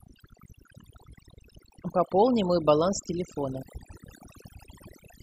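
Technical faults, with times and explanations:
Throughout: overdone noise removal. The noise reduction was pushed too hard for how noisy the source was, so any frequency band sitting close to its noise estimate is pulled far down or switched off entirely. Between phrases the background collapses to near silence dotted with small twinkling specks where isolated bands flicker on and off. The quieter components of the speech fall under the same threshold and vanish.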